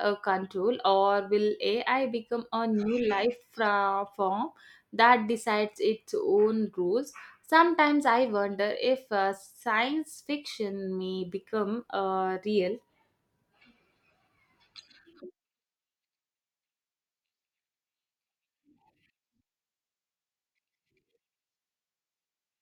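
No audible technical faults.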